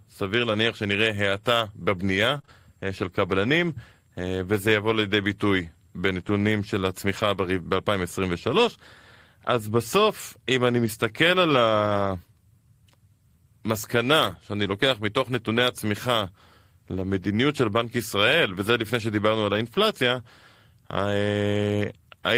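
Speech, with two kinds of network fault. From 2.37 to 2.49 s there is repeated packet loss, heard as robotic sound. Three short holes open in quick succession, the longest about 22 ms. Each is patched by stretching the last bit of sound, so about half of that span is concealed. The result is a brief choppy stutter with small pieces missing.

There are also five spots where a lost packet was rebuilt from error correction: 7.17 to 7.27 s, 10.85 to 10.87 s, 14.19 to 14.37 s, 16.95 to 17.01 s, and 17.89 to 17.91 s. The rebuilt stretches last from 20 to 100 ms. There are no gaps. Instead, each spot sounds briefly rougher and noisier. That points to Opus in-band forward error correction. The next packet carried a low-bitrate copy of the lost one, and the decoder played that copy.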